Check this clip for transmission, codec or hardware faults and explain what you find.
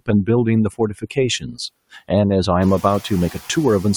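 There's one fault here, and it comes from the noise suppressor rather than the transmission or codec path.

Between 1.4 and 1.57 s you get speech cut by the noise suppressor. The suppressor misjudged a stretch of speech as background and pulled it down along with the noise, by about 14 dB at its deepest, over roughly 150 ms in total. It sounds like that bit of speech briefly goes faint or gets swallowed. The room noise that swells by about 19 dB around 2.5 s is just the recording environment, and it still sits about 21 dB under the speech.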